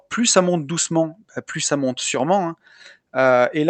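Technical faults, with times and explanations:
2.15–2.20 s, one channel drops out: one stereo channel was likely lost for 50 ms just after "bah plus ça monte". The mono sum then kept only half the shared signal, so the speech level dips abruptly by about 6 dB before snapping back.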